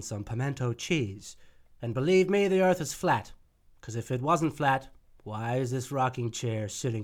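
No technical faults can be heard anywhere in it.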